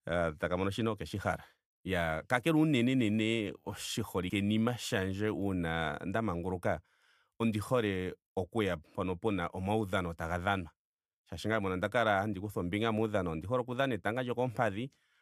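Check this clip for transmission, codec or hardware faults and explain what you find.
One codec fault is present: compressed frames skipped at 4.30 s. A short run of compressed frames, about four, was never decoded, so the speech jumps forward by roughly a tenth of a second.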